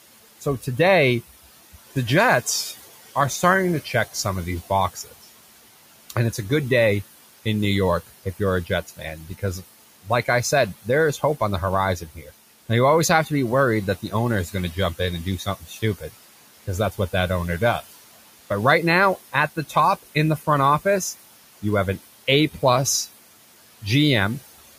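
Speech recorded over room noise sitting about 17 dB below the voice, with noise suppressor artifacts running through the whole clip. The suppressor pulls the background down by about 16 dB, band by band and frame by frame. As a result, the floor drops away in the gaps and rises back under each phrase. Speech cut by the noise suppressor occurs in five spans: 0.41 to 0.67 s, 1.74 to 6.38 s, 8.07 to 12.3 s, 13.26 to 17.14 s and 19.33 to 23.83 s. The gain reduction meant for noise also catches quiet parts of the speech, dipping them by about 10 to 16 dB. These quiet parts within the spans sound swallowed, adding up to a few hundred milliseconds in each of the longer spans and only a brief moment in the first.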